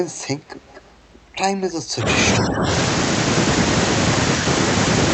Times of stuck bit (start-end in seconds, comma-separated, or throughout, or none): none